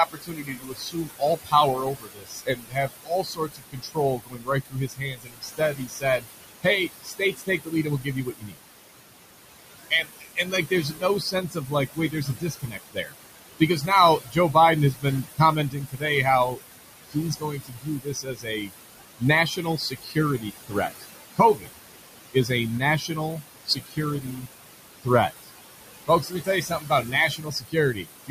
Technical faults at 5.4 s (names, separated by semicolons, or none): noise suppressor artifacts; speech cut by the noise suppressor